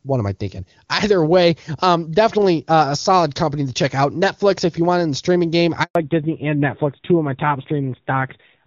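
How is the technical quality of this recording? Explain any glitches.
Two faults mark the recording, both arriving together late in the call.

At 5.83 s, right after "in the streaming game", the speech cuts out and stays silent for 120 ms, until 5.95 s. This is a handover gap: while the phone moved the call from one network to another, no speech frames came through. The voice dies away almost instantly, the hole stays dead silent, and whatever was said inside those 120 ms is gone for good.

From 5.95 s to the end, the sound turns muffled and coarser. This is a fallback to narrowband. Before the switch, the call ran as AMR wideband HD Voice, and that part sounds clean and full. After the handover, it came back on an older narrowband codec, so nothing above 4 kHz remains. The grainier texture points to a low bitrate of around 7.4 kbit/s.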